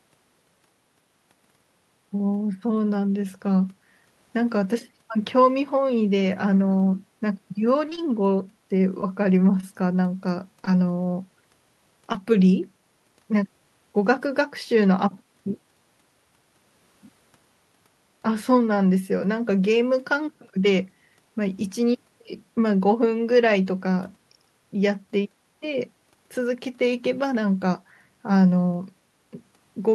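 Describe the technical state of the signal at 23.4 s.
At 23.4 s the speech signal is intact, with no audible technical fault at that moment.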